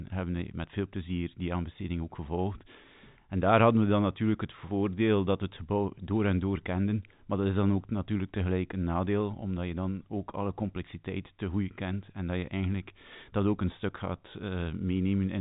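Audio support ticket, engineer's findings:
Engineer's findings: no faults found in the speech audio, with the G.711 mu-law telephone coding path at 64 kbps passing nothing above 3.8 kHz as expected.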